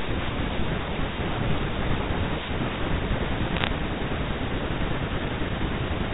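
From 3.54 to 3.67 s, bit errors on the digital phone line flip a fraction of a percent of bits in the G.711 stream, each throwing one sample off and producing a burst of sharp ticks over intact speech. The waveform shows isolated single-sample spikes, and the spectrogram shows thin vertical lines up to the 4 kHz telephone limit.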